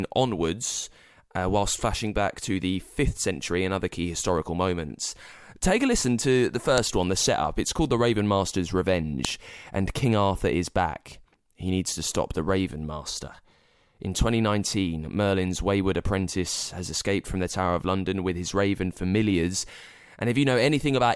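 Two sharp, loud clicks cut through this speech clip, one at 6.78 s, between "a listen to the" and "one the setup", and another at 9.25 s. Each is a brief snap that stands apart from the level and shape of the surrounding speech. This is a file header played as audio: separate WAV pieces were joined without stripping their headers, so those few dozen bytes of format data were decoded as samples at the start of each new piece.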